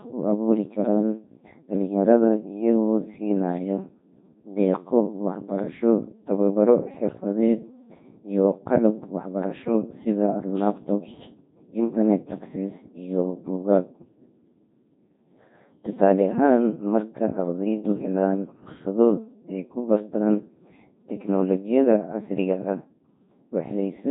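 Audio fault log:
throughout Codec 2 vocoder: robotic, buzzy speech, heavily damaged, as the decoder rebuilds the voice from sine waves using pitch, voicing, energy and envelope alone, fitting a 2.4 kbit/s stream.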